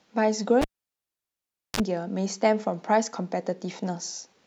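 At 0.62 s a live cable is pulled and plugged in again. The connection breaks with a sharp pop, and the speech drops to near silence for about 1.13 s. As the plug goes back in, only its tip touches at first, so the input picks up 50 Hz mains hum, heard as a short 34 ms burst of buzz. A second pop at 1.80 s marks the full connection, and the speech returns.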